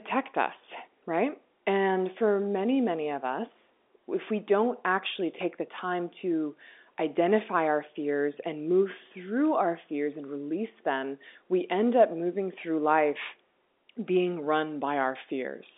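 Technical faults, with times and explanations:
No technical faults are present, so there are no times or explanations to give.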